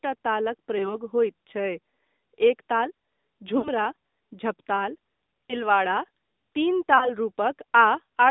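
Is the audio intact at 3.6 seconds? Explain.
No, there's a gap there. Lost AMR speech frames cover 3.58 to 3.69 s, about 60 ms, which fits three 20 ms frames failing. The decoder papers over them by reusing the last good pitch and vocal tract settings at falling gain, so the sound smears, dips and fades briefly before coming back a bit rough.

That moment also sits inside the AMR narrowband mobile codec, which runs through the whole clip. The speech is squeezed into roughly 200 Hz to 3.7 kHz with an audibly buzzy, synthetic edge, consistent with a mode around 10.2 kbps.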